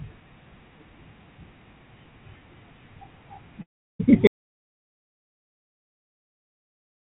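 At 3.62 s the sound breaks up in a long network dropout lasting to 4.01 s. About 0.38 s of audio never arrived, most likely lost packets on the call link. The receiver stretches the last fragment into a fading buzz before settling to near silence. The sound then resumes without the missing portion. On a spectrogram this shows as a smeared, repetitive band that thins out into an almost empty column. In the waveform the envelope decays into a flat trace.

At 4.27 s an audio dropout to silence begins and runs to the end of the clip, likely a lost input or a mute, with silence written from then on. The cut is abrupt and leaves no room tone. The waveform is a flat line, and the spectrogram is completely blank from that point. Before both faults the spectrogram shows nothing above 4 kHz, which fits the G.711 mu-law call path.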